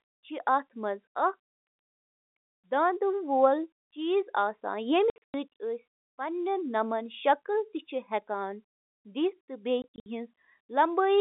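From 5.1 to 5.34 s, the speech is chopped by packet loss filled with silence. About 200 ms goes missing in holes scattered over that span. The longest hole is 100 ms. The gap lengths fit 20 ms packets lost in transit, with nothing played in their place. Each hole starts and stops abruptly. The same happens from 9.82 to 10.06 s, with 160 ms lost and a longest hole of 60 ms.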